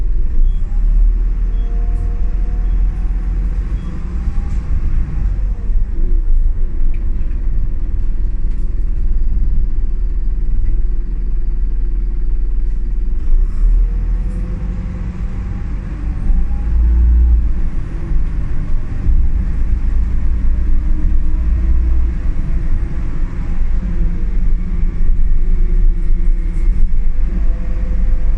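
No technical faults can be heard anywhere in the clip. Nothing in the sound points to a break in the path from source to playback.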